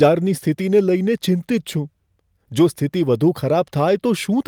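Nothing stood out on listening to this recording.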